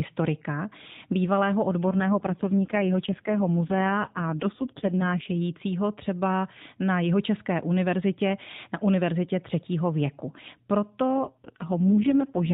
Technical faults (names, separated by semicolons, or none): AMR rate drop